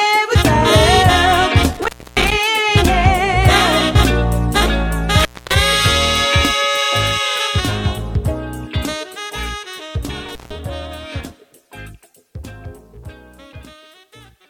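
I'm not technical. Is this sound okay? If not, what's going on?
No. The sound has an intermittent contact fault: a loose cable or plug briefly losing connection. It drops out with a crackle at about 1.73, 5.19 and 10.29 seconds. The gaps last roughly 0.28 seconds, a quarter-second and 0.15 seconds, leaving faint hiss.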